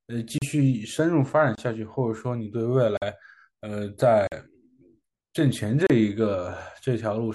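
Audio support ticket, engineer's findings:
Block of digital silence at 0.38, 1.55, 2.97, 4.27, 5.87 s: 26 to 46 ms speech dropouts. Output buffer not filled in time; 46 ms gaps fit a 2048-sample buffer.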